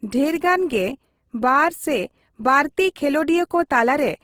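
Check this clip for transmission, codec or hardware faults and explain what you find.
The clip has one fault, present for its whole length: Opus compression. The speech sounds rough and grainy, with harmonics turned noisy rather than swirling. That likely comes from Opus in its music mode, at a rate that fits roughly 16 kbps. Short of bits, the encoder keeps each band's energy but fills detail with folded or noise-like content. A spectrogram shows energy reaching about 20.2 kHz, with few holes but blurred, speckled harmonic lines.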